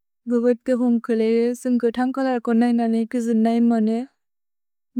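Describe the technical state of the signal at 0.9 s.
At 0.9 s the speech signal is intact, with no fault present at that moment.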